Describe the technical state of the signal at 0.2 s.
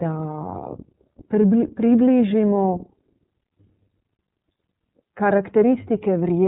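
At 0.2 s the speech has passed through the iLBC codec, which is active across the whole clip. The encoder coded each frame's excitation on its own rather than predicting from the previous frame, at a rate that fits 13.33 kbps with 30 ms frames. As a result, nothing above 3.8 kHz survives, so the speech sounds narrowband and muffled, with a plainly audible rough, synthetic grain.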